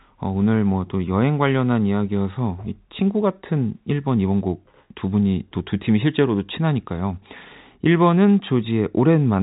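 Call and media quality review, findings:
No faults found: the speech carries the narrow band of G.711 telephone coding, with nothing above about 3.8 kHz and at most a faint level-following quantisation noise, as expected from a normally working telephone path.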